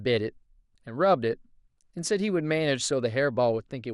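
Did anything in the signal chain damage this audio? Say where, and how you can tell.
Yes. From start to finish the speech sounds dull and muffled, with a gurgling, granular roughness and a top end that seems to flicker in and out rather than rolling off smoothly. That points to the codec stage, most likely MP2 compression at a low rate, around 80 kbps. Layer II divides the spectrum into 32 equal sub-bands and, when bits run short, drops upper bands entirely and quantises the remaining ones coarsely, producing exactly this unstable, grainy dullness.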